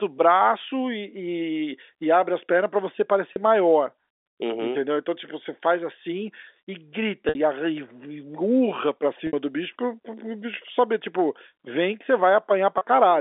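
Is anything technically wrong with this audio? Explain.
Yes, there is packet loss with pitch repetition at four points in this telephone-band speech. Audio went missing in transit, and the receiver filled each gap by repeating the last pitch period. The 30 ms gaps sound like a briefly held, buzzy tone, and the 60 ms gaps stretch that tone and let it fade. The gaps come at 3.33 s after "as pernas para você" (30 ms, likely one lost packet), at 7.29 s after "faz assim e grita" (60 ms), at 9.27 s between "urra pra" and "do bicho pro pro" (60 ms), and at 12.78 s (30 ms).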